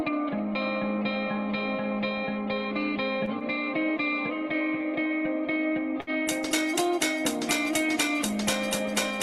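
At 3.25 to 3.30 s and again at 6.01 to 6.10 s there is a short stall from a late packet. The jitter buffer ran dry, so the receiver held the last sound for about 19 ms and then about 65 ms until the packet arrived, and playback resumed where it left off with nothing lost. Each stall is a brief stretched hold with a faint buzz or dip, the second one longer. Around it, the Opus coding noise and the top end near 12 kHz sound as expected for the call path.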